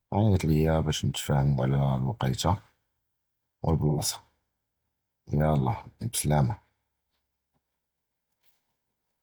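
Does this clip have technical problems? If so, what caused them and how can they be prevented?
Yes. From 3.89 to 4.01 s the speech gives way to a smeared, noisy patch about 85 ms long, the mark of AAC frame loss with concealment. The decoder received nothing for that stretch, which fits two lost frames, and filled the gap by reusing the last good spectrum with randomised phase. The gap is too short to fade toward silence. Stronger forward error correction, retransmission, or a deeper jitter buffer on the transport would prevent it.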